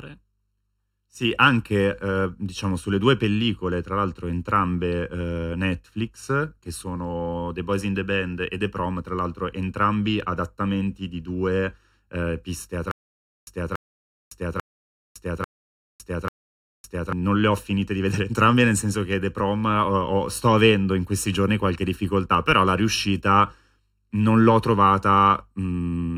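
From start to finish the speech has channel delay comb filtering: one channel lags by under a millisecond, and the mono sum cancels at evenly spaced frequencies from around 700 Hz upward. It sounds hollow and phasey, and a spectrogram shows fixed dark horizontal notch bands.

From 12.91 to 17.13 s there is a stutter with silent gaps. A 284 ms fragment repeats five times, once every 843 ms, with 558 ms of digital silence after each. The likely cause is a stalled stream replaying its last buffer. The waveform shows identical blocks separated by flat lines, and the audio that should have played there is lost.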